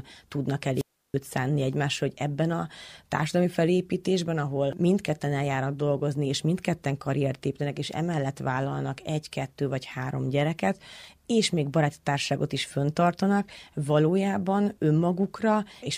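Speech with a wireless microphone squelch dropout from 0.74 to 1.15 s: a hiss rise as the FM signal fades, then a 330 ms muted hole before "szánni egymásra hogy ebben". The hiss distinguishes it from a clean digital gap.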